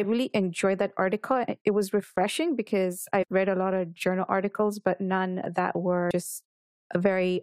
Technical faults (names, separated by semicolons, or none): compressed frames skipped